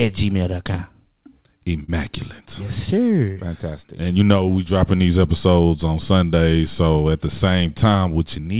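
Short concealed packet loss at 1.84 to 1.90 s and again at 3.32 to 3.38 s: about 40 ms of audio arrived too late each time, so the receiver extended the preceding sound to cover the gap, giving a brief smear before rejoining. The band stopping at 4 kHz fits a G.711 narrowband call.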